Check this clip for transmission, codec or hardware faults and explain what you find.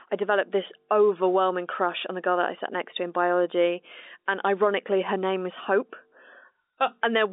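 No transmission, codec or hardware faults can be heard in this speech. The sound has the narrow band of G.711 telephone coding, running from about 250 Hz to 3.7 kHz with nothing above 3.8 kHz, and the coding is A-law at 64 kbps.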